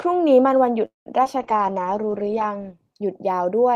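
At 0.85 to 1.08 s, a call audio freeze stretches the last sound, fades it to about 0.15 s of silence, then resumes where it stopped. The likely cause is delayed packets emptying the jitter buffer.

At 1.24 to 1.27 s, short concealed packet loss: about 20 ms never arrived, and the patched continuation leaves a brief smear.

From 1.38 to 2.67 s, a call bitrate drop takes the encoder from 32 to 11 kbps and narrows bandwidth from 20 kHz to 8 kHz, leaving the sound muffled and rough for over a second.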